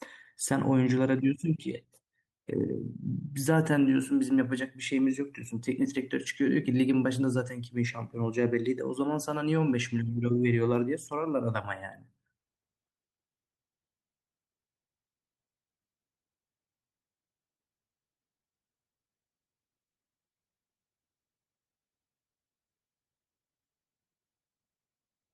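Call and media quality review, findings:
No faults found in speech.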